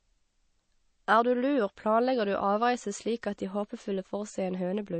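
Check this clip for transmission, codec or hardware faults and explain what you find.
One codec fault runs through the whole speech clip: the sound shows the marks of MP3 compression. From start to finish there is a hard ceiling, with nothing above 8.3 kHz, and the codec damage is plainly audible. The likely cause is an MP3 encode at a low bitrate, which fits about 32 kbps. Short of bits, the encoder drops weaker frequency lines and lets them flicker in and out between frames. This gives a watery, swirly texture and blurred onsets. On a spectrogram, energy stops flat at 8.3 kHz, and the upper bands look patchy, with small holes blinking on and off.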